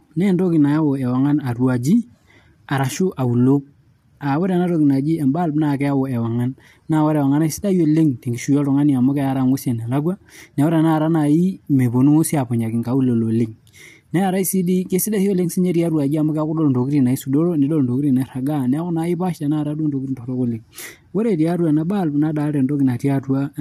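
Throughout, likely low-delay AAC compression, fitting a rate near 32 kbps, makes the speech rough and grainy, with noise between harmonics and a lowered or synthetic top band.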